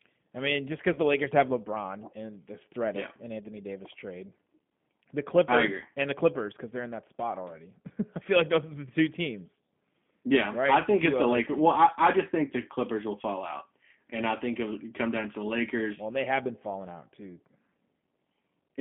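G.729 codec coding runs through the whole speech clip: an 8 kbit/s model of pitch and vocal tract leaves plainly audible roughness and a 150 Hz to 3.5 kHz telephone band. VoIP packet loss concealed by the speech codec occurs from 0.93 to 0.99 s. About 20 ms of audio is missing, which fits a single lost packet, and the decoder extends its last pitch and filter with falling gain before recovering.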